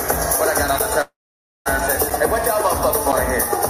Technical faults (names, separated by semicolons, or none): periodic USB or driver dropouts; call audio freeze; skip ahead